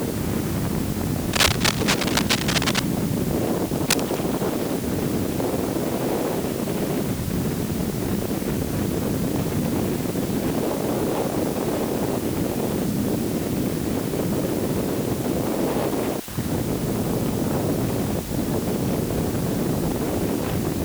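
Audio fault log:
Throughout: low bit depth with dither. A steady, even hiss sits under the whole clip, loud enough to be only about 15 dB below the sound, with no grinding or gritty distortion on quiet passages. The signal is stored with very few steps, which fits roughly 5-bit resolution. Random dither added before rounding turns the coarse rounding error into constant broadband noise instead of distortion that follows the signal, so it is heard as a uniform hiss.
1.33–2.84 s and 3.76–4.19 s: cable scratch noise. Dense, irregular crackling and rustling bursts ride over the sound. The first, longer stretch is about as loud as the sound itself, and the shorter second one is about 5 dB quieter. This is likely a worn cable, connector or control being moved, so its contact resistance jumps rapidly and injects ragged noise into the signal. That produces the brief scratching texture and explains why it stops once the contact settles.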